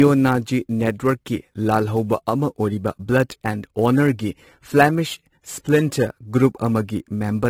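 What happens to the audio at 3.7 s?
At 3.7 s the converter's clock is wandering, with timing errors of around 10 µs, so each sample lands slightly off time. That adds a rough hiss to the speech about 25 dB down, strongest on loud and bright sounds. This runs through the whole clip. The audio is also low-bitrate audio saved at a high bitrate, likely an earlier low-rate encode later re-saved as MP3. Nothing is present above 16.6 kHz, and the first codec's artefacts remain.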